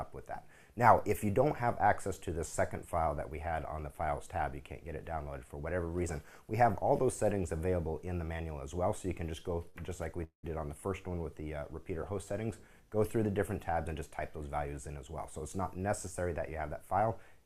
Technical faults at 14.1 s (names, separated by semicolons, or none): jitter buffer speed-up